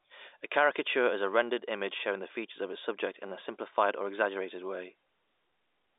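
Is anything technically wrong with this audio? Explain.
No, nothing stood out as technically wrong when listening to this speech.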